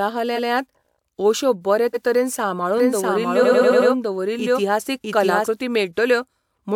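Speech, marred by repeated frames and a doubled audio track. At 0.35 to 0.49 s a 139 ms block plays twice, and just after "अश्यो बरे" at 1.93 to 2.02 s a 93 ms block does the same. From 3.42 to 3.88 s a 93 ms block loops five extra times, adding 464 ms. Each is a stutter. On a waveform these show as identical copied segments placed end to end, and on a spectrogram as a tiled pattern. From 2.78 to 5.48 s, right after "अश्यो बरे तरेन", a second full-band copy runs about 0.7 s behind at roughly the same loudness. It is dry, with no decay, and it starts and stops abruptly. That most likely comes from a slower second capture path or an edit that left two copies out of step. A spectrogram shows the same patterns repeated at a fixed offset, switching on and off sharply.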